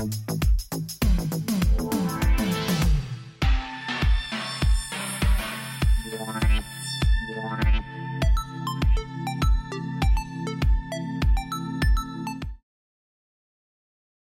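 Nothing here counts as a fault, and the only thing worth noting is the gentle fade-out that begins around 12 seconds and finishes at 12.64 s, smooth and without any click or hard edge.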